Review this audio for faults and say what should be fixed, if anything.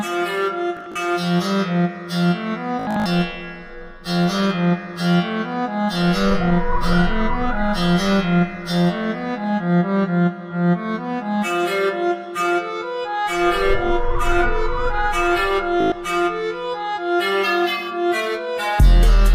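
Bluetooth stutter appears three times: 0.77 to 0.96 s, 2.80 to 3.06 s, and 15.81 to 15.92 s. Late or missing wireless packets made the receiver replay its last short buffer, so a tiny slice repeats as a buzzing stutter, about 93 ms, 187 ms and 112 ms of audio lost. The second event's longest unbroken run is near 75 ms. Unlike a plain dropout, the gap is filled with repeats rather than silence. Unlike a tape skip, the sound resumes later, with the lost material simply gone. Keep the transmitter close, with a clear line of sight away from 2.4 GHz interference, or record over a wired connection.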